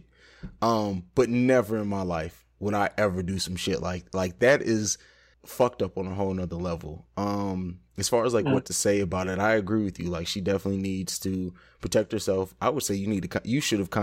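Nothing in this speech recording stands out as a technical fault, so there's nothing to point to here.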